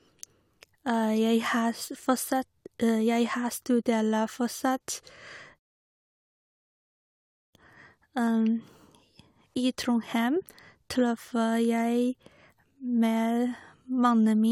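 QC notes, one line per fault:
Throughout, generation loss: swirly, smeared, hollow speech with blurred attacks, likely from a few successive lossy re-encodes, each adding fresh quantisation noise, consistent with AAC-LC near 96 kbit/s.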